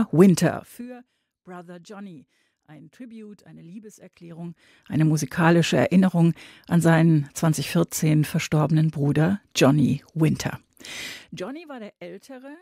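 Speech clip with zipper noise at 0.43–0.85 s, 4.18–4.99 s and 11.09–11.52 s. Level moves about 25 dB in unsmoothed steps of 3, 1 and 2 dB, roughly twenty per second, ticking audibly.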